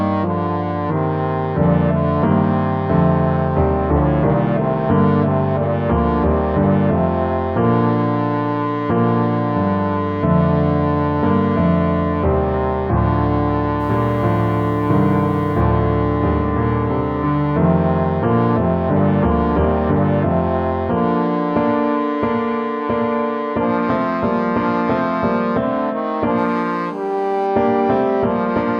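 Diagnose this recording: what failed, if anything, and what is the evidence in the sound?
From 13.80 to 15.61 s the sound turns grainy, with a gritty distortion that rises and falls with the signal and sits roughly 40 dB below it. Quiet passages are hit hardest. This is low bit depth without dither, at the sample-format conversion stage. The likely cause is rounding to about 8 bits with no dither. Unlike steady hiss, this error is tied to the signal: it changes character with the sound instead of staying constant.

From 26.38 to 27.47 s a hard, raspy buzz appears. It is pitched at 217 Hz, rich in harmonics, and about 26 dB below the signal. This is GSM phone buzz, picked up in the analogue wiring. A nearby 2G handset in a call pulses its transmitter 217 times a second, and the audio circuit rectifies those bursts. Mains hum sits at 50 or 60 Hz and is smoother. This buzz holds steady and ignores the signal.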